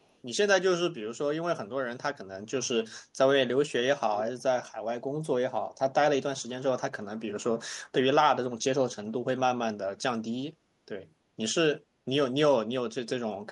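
Between 0.02 and 0.14 s a faint echo leak appears: a delayed copy of the speech arriving about 332 ms after the original, very quiet, roughly 40 dB below the direct speech. The likely cause is a far-end loudspeaker whose echo canceller let some of the microphone pickup slip back into the call. What separates it from room reverberation is the distinct gap: reverb smears continuously off the sound, while this returns as a separate, later repeat.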